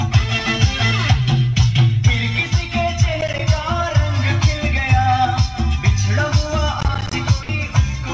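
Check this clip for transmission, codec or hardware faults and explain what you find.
Two kinds of fault are present: processor overload crackle in two bursts, and a short stretch of sound dropped by the voice detector. The call path itself carries the G.722 wideband band limit, with nothing above 8 kHz.

Processor overload crackle occurs from 3.21 to 3.39 s and again, longer, from 6.81 to 7.13 s. The processor fell behind and kept missing the deadlines for buffers of around 10 ms, about a handful in the first burst and well over a dozen in the second. Each missed buffer played as silence, so the sound is chopped into a gritty, tearing crackle. On a waveform, these are repeated flat gaps with abrupt edges. On a spectrogram, they are thin vertical broadband clicks at each edge.

The sound dropped by the voice detector comes at 7.43 to 7.49 s, just after the second crackle burst. For 60 ms, the sound gives way to a steady, featureless low-level hiss before returning. 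The likely cause is the sender's voice detector treating that moment as background and stopping transmission, with the receiver filling the gap with comfort noise. On a spectrogram, the signal's structure vanishes into a uniform faint noise band. On a waveform, there is a short, even, low-amplitude stretch.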